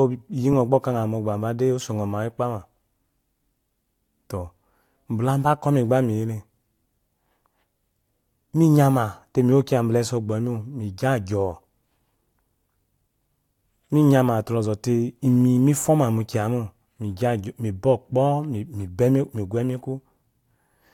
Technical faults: none

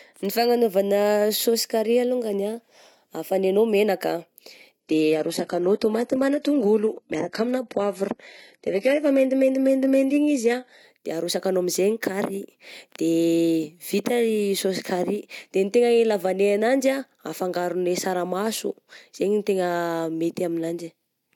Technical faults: adaptive stream at a lower bitrate

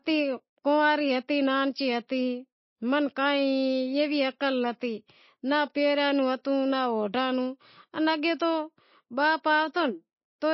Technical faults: MP3 compression

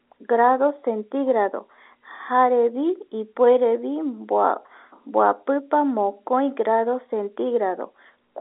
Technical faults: none

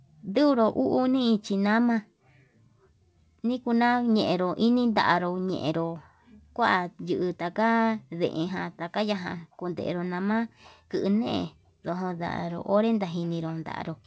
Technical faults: none

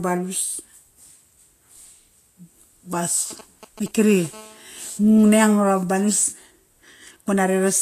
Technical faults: Vorbis compression; GSM signalling bursts; GSM phone buzz

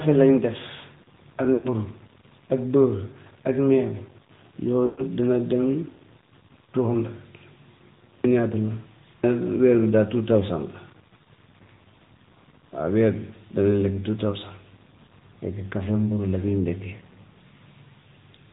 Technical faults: low bit depth without dither; AMR narrowband mobile codec; lost AMR speech frames

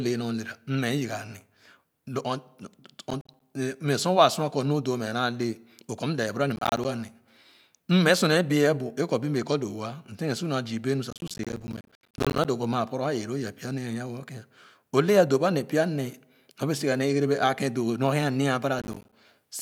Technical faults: processor overload crackle

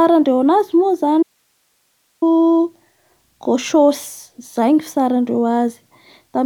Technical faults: audio dropout to a faint residue

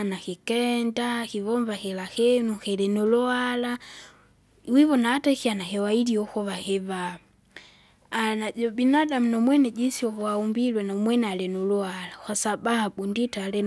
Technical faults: none

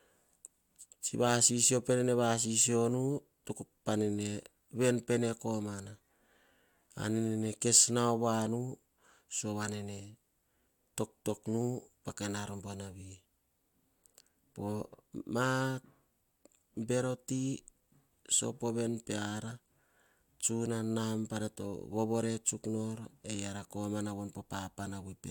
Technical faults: none

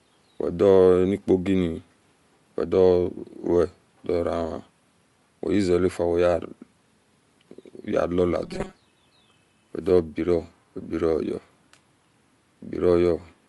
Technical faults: Bluetooth LC3 compression; robotic sound from repeated short buffers

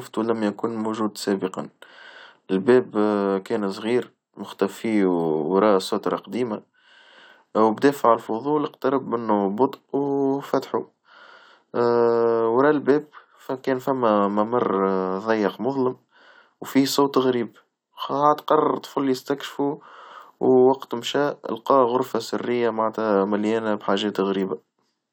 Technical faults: none

